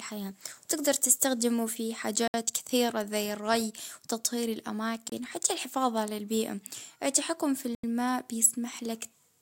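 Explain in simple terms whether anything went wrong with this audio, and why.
The speech drops to dead silence three times: at 2.28 s for about 64 ms, at 5.10 s for about 25 ms, and at 7.75 s for about 86 ms. These are Bluetooth stalls, likely caused by interference holding back wireless packets until the headphones ran out of audio and briefly paused.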